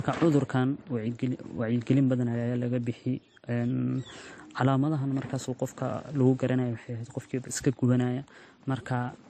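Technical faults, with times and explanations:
Throughout, transcoding between lossy codecs: The speech carries two layers of coding damage at once. Nothing sounds above 14.3 kHz, and the top end has a dull quality. On top of that, the different artefacts are heard together. This is likely two lossy stages in a row. The first points to a WMA encode at a moderate bitrate. A low-bitrate MP3 encode then followed. The MP3 stage wasted bits re-coding the earlier artefacts and added its own.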